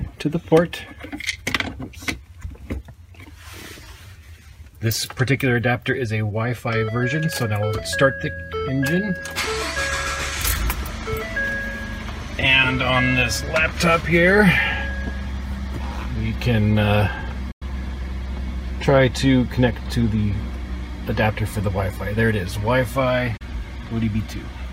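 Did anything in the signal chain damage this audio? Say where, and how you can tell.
Yes, a digital broadcast dropout at the reception stage. The sound fades out within about 8 ms and goes silent from 17.51 to 17.62 s and from 23.37 to 23.42 s. The receiver muted on failed frames, and the 96 and 32 ms holes suggest whole 32 ms frames.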